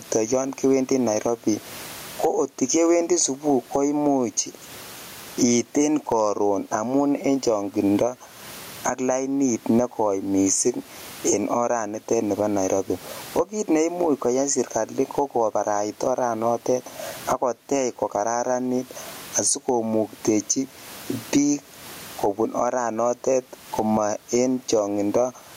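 Right from the start and all the way through, there's gain pumping on this speech. Every time the talker gets loud, the level gets yanked down, with a swing of roughly 25 dB. The cause is likely the input gain set way too hot with a fast limiter or compressor clamping each peak. That flattens loud and soft into a squashed, crowded sound, and the room noise sits about 38 dB under the voice.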